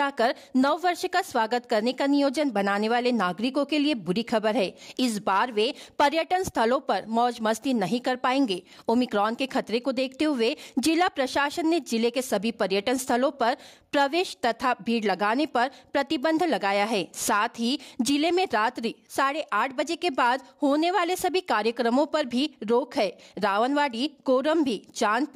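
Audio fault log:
Nothing to log here, as I listened along there was nothing in the audio that caught my ear as a problem.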